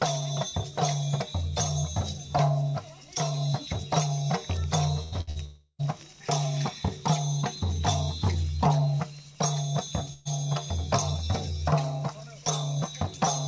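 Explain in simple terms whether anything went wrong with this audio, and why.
Yes, several things went wrong. There are four bursts of packet loss, at 5.03 to 5.15 s, 5.21 to 5.30 s, 5.30 to 5.39 s, and 10.13 to 10.28 s. Each time, a short piece of the sound, 60 to 120 ms, never arrived. The player stretched the last sound into a brief fading buzz or hiss, then jumped ahead.

There is also a long network dropout from 5.45 to 5.82 s. For about a third of a second, the sound is a held buzz or hiss that fades out and ends in a moment of silence. Then the audio returns further on, with that stretch missing. The likely cause is that the connection briefly delivered nothing at all.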